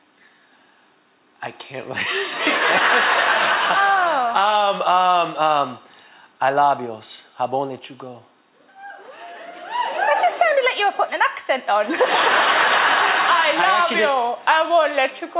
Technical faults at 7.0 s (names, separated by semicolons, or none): none